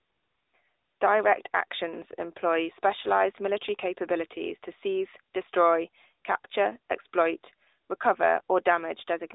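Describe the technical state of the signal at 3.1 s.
At 3.1 s the speech sounds thin, buzzy and synthetic, confined to about 300 Hz to 3.7 kHz. This is the AMR narrowband mobile codec, present throughout, whose plainly audible damage fits a rate near 10.2 kbps.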